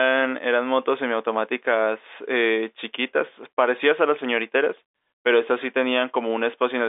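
Nothing is technically wrong with this speech recording, which carries the usual narrow band of a fixed telephone line, with nothing above about 3.8 kHz.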